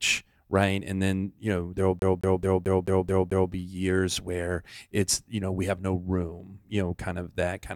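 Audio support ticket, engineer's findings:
CD stuck on one turn, speech, 1.99–3.52 s. Same 218 ms segment repeats seven times, brief mute at each jump. Scratch returning laser one track per rotation. Fixed, even stutter rate with gaps distinguishes it from a buffer-underrun repeat.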